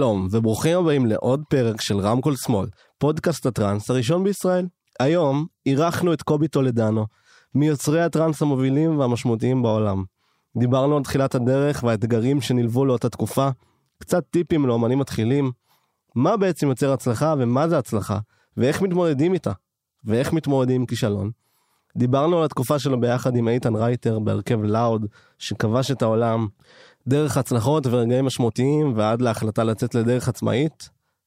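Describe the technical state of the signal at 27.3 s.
The signal at 27.3 s is intact, with the speech passing through cleanly and no audible fault at that point.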